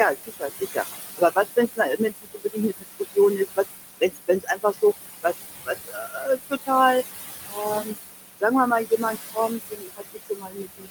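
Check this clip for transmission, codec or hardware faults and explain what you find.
Yes, there are two faults, and both come from a noise suppressor.

Noise suppressor artifacts run through the whole clip. The suppressor treats steady frequency bands as noise and pulls them down, frame by frame, by about 16 dB. The room noise, about 9 dB under the speech, sinks in pauses and returns under speech.

Speech cut by the noise suppressor occurs at 0.24–0.77 s, 1.17–3.58 s, 4.01–4.83 s, 5.23–6.69 s, 7.41–7.97 s, and from 9.34 s to the end. The suppressor mistakes quiet speech for noise and turns it down by about 17 to 21 dB at worst. Only part of each span is hit, roughly 0.3 to 0.7 s in the earlier spans, and those parts sound swallowed and faint.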